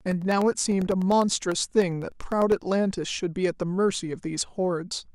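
From 0.12 s to 2.62 s, the speech carries a steady train of small ticks, ten per second at a 0.1 s spacing, around thirty in all. They sound only where there is signal. These are periodic USB or driver dropouts: at each fixed interval a background task stalls the bus or audio driver, and about a millisecond of audio goes missing, replaced by silence. The sudden gap in the waveform produces each click.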